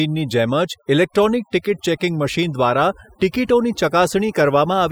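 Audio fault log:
Throughout, overdone noise removal: noise reduction was pushed too hard, so frequency bands sitting near the estimated noise level are cut away along with the quieter parts of the speech. The background drops and breaks up into twinkling specks. Those isolated specks and the gaps set it apart from plain low-pass filtering or a noise gate.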